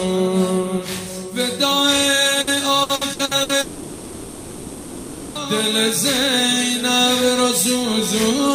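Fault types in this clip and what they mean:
Repeated packet loss (robotic sound): From 2.41 to 3.52 s the audio breaks up in six separate gaps, none longer than 60 ms, adding up to about 360 ms, roughly a third of that stretch. Each missing piece is covered by extending the sound just before it. Because the holes come so close together, those short patches keep replacing real audio, and the passage turns choppy with pieces missing.
Long network dropout: From 3.61 to 5.38 s, about 1.74 s of audio never arrives and is replaced outright. The receiver carries the last sound forward across the whole gap. There is no silence in it, only a synthetic continuation where the real audio should be. When the signal returns after 5.38 s, the missing material is simply gone. A sustained break in delivery is the likely cause of a gap this long.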